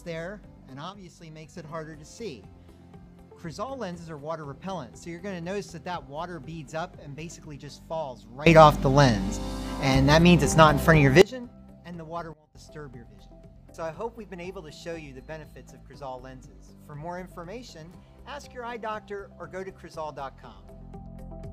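At 0.90 s the level drops by about 6 dB until 1.56 s, then rises by about 21 dB from 8.46 to 11.22 s, and falls by about 19 dB from 12.33 to 12.55 s. Each is a sudden gain jump, likely a digital gain applied without a ramp. The sound and background noise step together. On the waveform the envelope changes height in a single sample, and the spectrogram shows a uniform brightness change across all frequencies at each edge.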